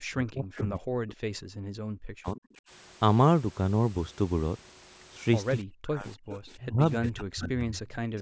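From 0.0 to 1.48 s, 2.06 to 2.47 s and 5.64 to 6.08 s, the speech is suppressed in double talk. It drops by roughly 40 dB or breaks up, likely because the echo canceller turned down both its own talker and the loudspeaker echo while they overlapped. The same suppression returns at 6.57 to 6.8 s and 6.98 to 7.74 s.

At 6.3 to 6.37 s and 7.73 to 7.95 s there is an echo leak: a faint copy of the speech about 20 dB down, delayed by about 0.3 s. It is likely loudspeaker pickup that the canceller failed to remove.

From 8.06 to 8.12 s the background is gated by the echo canceller, so the room sound briefly dips by about 23 dB before recovering.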